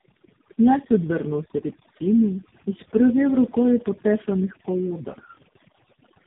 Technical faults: overdone noise removal; tandem speech coding

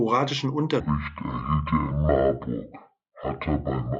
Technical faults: section at the wrong speed

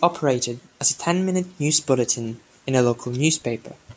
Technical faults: none

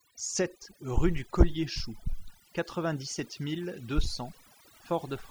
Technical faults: overdone noise removal

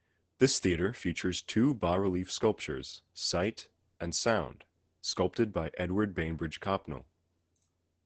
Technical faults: Opus voice compression

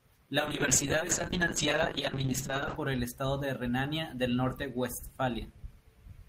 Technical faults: call bitrate drop

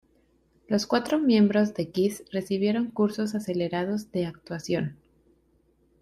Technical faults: none

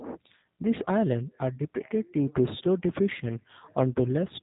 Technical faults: G.729 codec

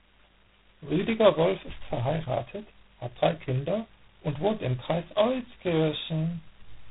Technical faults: G.726 ADPCM

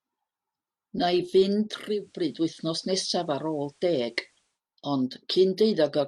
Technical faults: digital radio blending to analogue

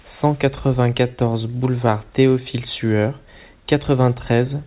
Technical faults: none

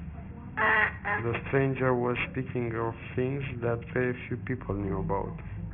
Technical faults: aliasing

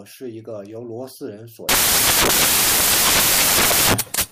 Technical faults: samples built from the wrong bytes

